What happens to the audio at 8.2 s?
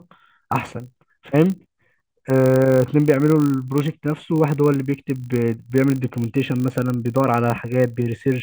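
At 8.2 s the speech still carries the filter-restarted-on-every-block fault, which runs through the whole clip. The filter loses its memory at each block boundary and starts again from silence, so every block opens with a small transient. These repeat 50 times a second, which fits 20 ms blocks, giving a 50 Hz buzz that swells and fades with the speech level. A waveform shows evenly spaced spikes; a spectrogram shows a harmonic comb at 50 Hz spacing.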